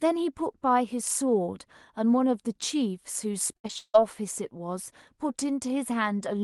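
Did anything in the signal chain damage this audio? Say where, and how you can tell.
Yes. The network stage caused repeated packet loss (robotic sound) from 3.53 to 3.96 s: five gaps, the longest 159 ms, patched by stretching earlier frames. A spectrogram shows smeared, frozen harmonics.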